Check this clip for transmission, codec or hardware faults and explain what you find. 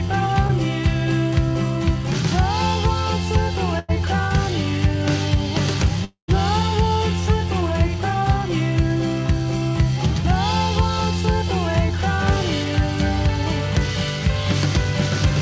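Three packet-loss faults are audible, all on a call path whose audio stops at 8 kHz, which fits a wideband call codec such as G.722.

At 0.47 to 0.52 s there is a short concealed packet loss. About 30 ms of audio never arrived in time. The receiver covered the hole by extending the sound just before it, then blended back into the real signal. The result is a brief smear lasting about 50 ms. Whatever fell in that gap is lost.

From 3.79 to 3.91 s there is a burst of packet loss. Several packets in a row went missing, about 90 ms of audio in all. The receiver kept the last sound going for roughly 90 ms and faded it as the gap went on. This is heard as a held, fading stretch. The audio then picks up further along, with the lost part gone.

From 6.04 to 6.31 s, the sound stalls for about a quarter of a second. The last sound is stretched and fades. About 0.11 s of silence follows before the audio returns further on, with about 240 ms never played. 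This is likely a long network dropout, where nothing reached the receiver for that stretch. The concealment ran out and left only silence until packets arrived again.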